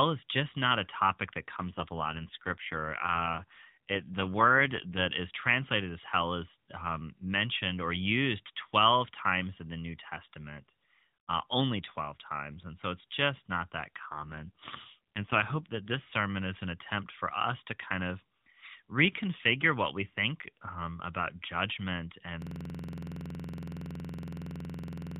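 From 1.56 to 5.13 s the speech turns rougher and more synthetic. This is an AMR rate drop. The band stays the same and nothing cuts out. The sound suggests the mobile link fell from 12.2 kbps to about 5.9 kbps and spent the freed bits on error protection. The lighter AMR-NB coloration heard elsewhere returns at 5.13 s. The same drop comes back from 13.99 to 16.07 s, with the same buzzy, synthetic texture before the rate recovers.

At 22.42 s a system hang loop begins and lasts to the end. The host or driver stalled while the sound hardware kept replaying its ring buffer. One 46.44 ms slice repeats exactly, many times over. At 21.5 repeats a second it sounds like a rapid machine-gun stutter, close to a rough buzz. The loop length fits a 2048-sample buffer.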